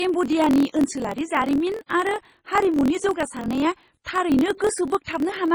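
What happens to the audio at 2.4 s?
At 2.4 s, as throughout the clip, two faults overlap. The speech has likely passed through heavy MP3 compression at a low bitrate, perhaps around 24 kbps, so the treble is cut and the sound turns watery and swirly, with smeared attacks. There is also a block size mismatch (truncated): one stage writes longer blocks than the next reads, which fits a 1024-sample read, and each block's tail is dropped. The result is a 43.1 Hz buzz, with the speech running 1.12 times fast at roughly normal pitch.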